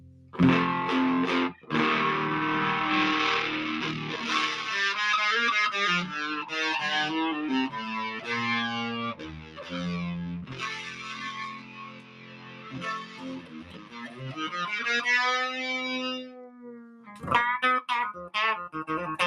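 From the start, a speech-oriented noise suppressor is working on material it was not built for, treating steady tones, ambience and decay as noise. The level swings by roughly 15 dB as it engages and lets go. A waveform shows a pumping envelope, and a spectrogram shows sustained bands thinning between onsets.

At five points the suppressor clamps down harder and cuts the sound itself: 0.00 to 0.36 s, 1.55 to 1.71 s, 9.14 to 9.75 s, 10.41 to 14.39 s and 16.21 to 17.30 s. The deepest drop is about 13 dB, except about 10 dB at 1.55 s. Held or fading parts sink and tails end early, while sharp attacks get through. On a spectrogram these spans show darkened, truncated sustain with transients intact. The waveform shows shrunken envelopes, most clearly across the four-second stretch from 10.41 s.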